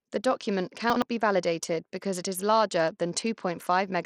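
The whole clip carries plainly audible damage that points to Bluetooth SBC compression as the likely cause. The treble thins and flickers. A gritty, grainy noise rides on the speech. The coarse quantisation fits a starved bit pool, around 80 kbps.

From 0.90 to 1.02 s the chunks are out of order. A 60 ms chunk plays one chunk late, after the audio that should follow it. Nothing is missing, but the sequence jumbles briefly, with three hard joins.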